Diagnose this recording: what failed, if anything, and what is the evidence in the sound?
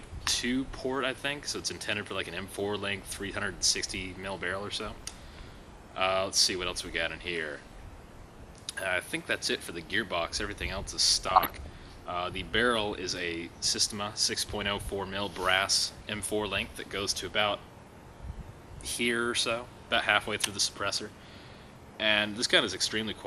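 Codec stage: MP2 compression damage is plainly audible throughout, a dull top end with granular gurgling, which likely reflects an MPEG Layer II encode around 80 kbps.

Transmission stage: DAB burbling from 11.26 to 11.67 s. Short noise blips in sub-bands mean a small fraction of bit errors passed error correction into the audio frames.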